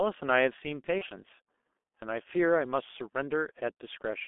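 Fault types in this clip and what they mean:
G.723.1 codec: muffled, hoarse speech with smeared consonants throughout, confined to roughly 250 Hz to 3.5 kHz, heavy coding damage consistent with about 6.3 kbit/s.
VoIP packet loss concealed by the speech codec: a brief fading smear near 0.99–1.05 s, where the decoder extrapolated over about 30 ms of missing audio, fitting one lost frame.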